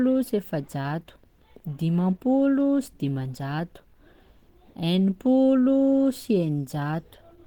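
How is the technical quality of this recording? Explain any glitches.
The recording has plainly audible Opus compression throughout. The speech sounds hoarse, muffled and grainy, which points to Opus at a low rate, around 16 kbps, likely falling back to its hybrid speech mode, although the band still reaches about 20.2 kHz.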